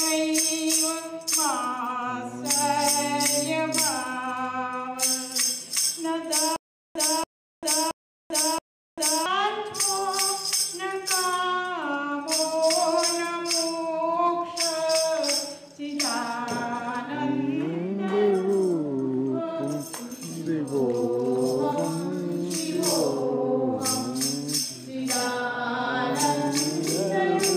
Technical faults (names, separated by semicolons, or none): stutter with silent gaps